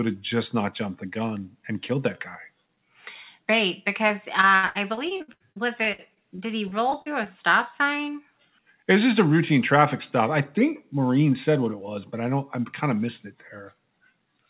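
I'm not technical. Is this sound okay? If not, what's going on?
No. From 4.08 to 7.28 s the speech turns choppy and robotic. This is repeated packet loss: many small pieces, the longest about 82 ms, went missing and were patched by stretching the previous sound. One lost piece would cause a single blip. This many in a row produces the mechanical texture. Throughout the clip, the call line also keeps everything below 4 kHz, giving a phone-like sound.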